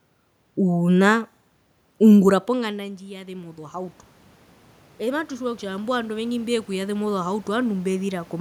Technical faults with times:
2.45-4.03 automatic gain rising
4.98-8.36 automatic gain rising

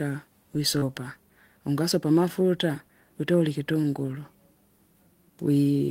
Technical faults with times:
0.79-0.83 short concealed packet loss
3.81-3.85 short concealed packet loss

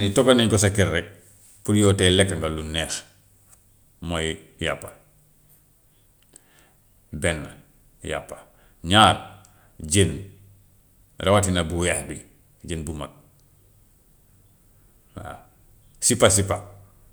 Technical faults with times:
none

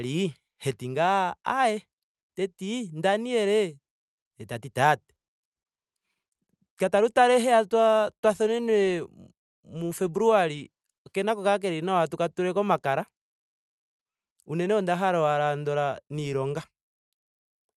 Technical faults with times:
none

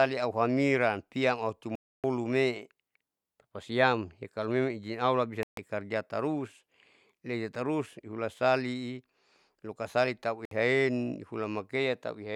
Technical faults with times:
1.75-2.04 Bluetooth dropout
5.43-5.57 Bluetooth dropout
10.45-10.51 Bluetooth dropout

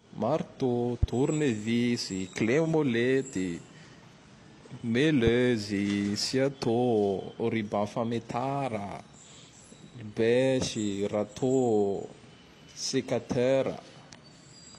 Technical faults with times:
1.03-1.05 loud pop
5.27-5.30 loud pop

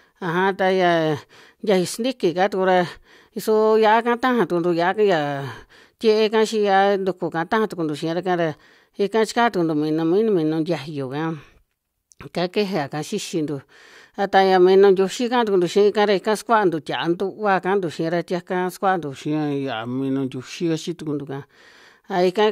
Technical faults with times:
19.14-21.13 section at the wrong speed

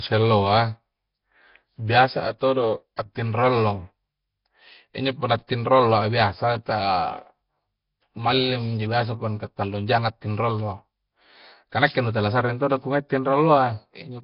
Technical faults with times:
0.00-14.23 Nellymoser compression

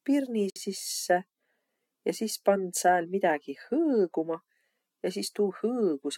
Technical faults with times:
0.50-0.56 gap at a join of encoded pieces

